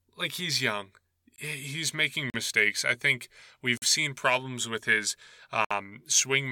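The speech clip has four blocks of digital silence: at 1.36–1.38 s right after "like he's young", at 2.30–2.34 s just before "mistakes I think", at 3.77–3.82 s between "making mistakes I think" and "seen problems with his", and at 5.65–5.71 s. The holes last 20, 40, about 46 and 60 ms. The signal cuts out and returns abruptly with no fade. That separates these gaps from faded or concealed dropouts, and it points to output buffers not being filled in time.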